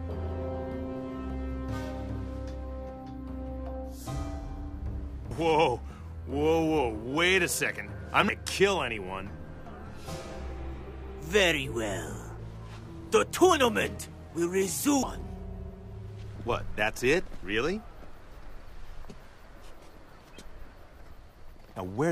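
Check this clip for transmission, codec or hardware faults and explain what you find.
Compressed frames are skipped at 8.28, 12.39, 15.02, 16.36 and 17.43 s. Each time, runs of 26.1 ms frames go unplayed, jumping ahead roughly 0.2 to 0.7 s, heard as a sudden jump forward in the audio.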